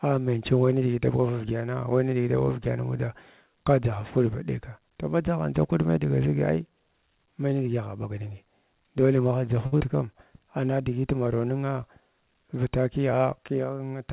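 A short stall from a late packet at 9.66 to 9.74 s: the jitter buffer ran dry, so the last sound is held for 61 ms with nothing lost before the speech resumes.

A short concealed packet loss follows at 9.78 to 9.82 s: 40 ms never arrived, and 22 ms of extrapolated sound covers the gap, heard as a brief smear.

A jitter buffer speed-up runs from 13.03 to 13.78 s: with too much speech queued, the receiver trims small pitch-period pieces, about 70 ms in total. The speech plays at 109% speed at unchanged pitch, sounding hurried, all within the G.711 A-law band that stops at 4 kHz.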